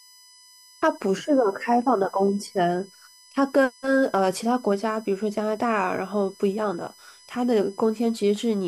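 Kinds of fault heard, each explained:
USB whine: throughout the clip, a steady fixed-pitch whine sits under the speech, built on a 1 kHz tone with its strongest component at 5 kHz, the fifth harmonic. The 1 kHz base matches the USB bus's 1 ms frame rate. The current drawn with each frame leaks into the audio path through shared power or ground, producing this buzz of harmonics. It stays roughly 30 dB below the speech.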